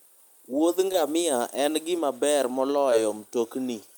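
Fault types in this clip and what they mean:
short concealed packet loss: two tiny smears at 0.92 s and 2.91 s, where about 10 ms of speech arrived late and the receiver covered each gap by extending the sound just before it.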